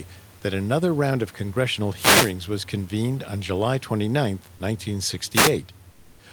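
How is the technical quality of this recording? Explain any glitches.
The recording has three technical glitches of two kinds: two bursts of radio noise and a brief stretch where the background is replaced by synthetic noise.

A wireless microphone noise hit occurs from 1.95 to 2.34 s, between "another round of congressional" and "was convened on", and again from 5.33 to 5.52 s. An analogue FM radio link loses signal when reflected paths cancel the direct one. The receiver's own noise then climbs over the audio, producing a short swish of static lasting roughly 0.4 s and then 0.2 s.

Comfort noise in place of the background appears from 5.91 to 6.19 s, a 280 ms gap. The likely cause is discontinuous transmission of the kind Opus DTX performs: when no speech is detected, the sender stops transmitting, and the receiver fills the pause with generated noise. The room's real background, which sits about 32 dB below the speech, gives way to a flat, featureless hiss about 4 dB quieter.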